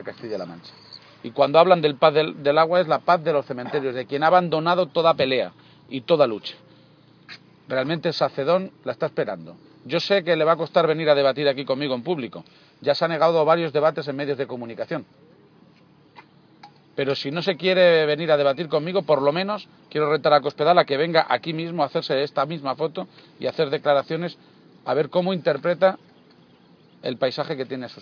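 No technical faults can be heard anywhere in the audio, with the signal continuous and intact throughout.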